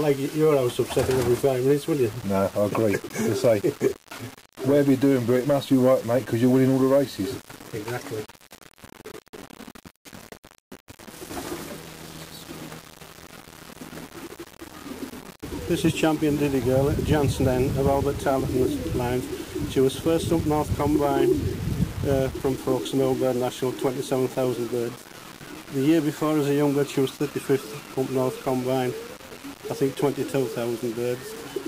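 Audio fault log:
throughout: low bit depth without dither. Grainy distortion rides on the sound and changes with it, worst in quiet passages, where it sputters or drops out. The likely cause is rounding to about 5 bits with no dither, leaving error around 20 dB below the signal.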